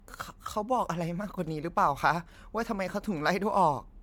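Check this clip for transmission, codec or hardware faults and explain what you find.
Generation loss is present throughout the speech. Likely the audio was MP3-encoded about seven times over, each pass re-quantising on a shifted frame grid, leaving a swirly, hollow, smeared sound with blurred attacks.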